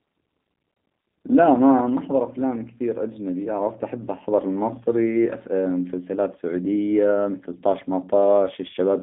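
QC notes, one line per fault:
Throughout, G.729 codec: the speech is squeezed into a telephone band of roughly 200 Hz to 3.6 kHz and rebuilt from a vocal tract filter, a pitch predictor and a few pulses per frame, which fits an 8 kbit/s G.729A stream, so it sounds plainly rough and synthetic. On a spectrogram, energy stops dead at about 3.7 kHz with nothing above, harmonics look smeared, and the waveform lacks fine transient detail.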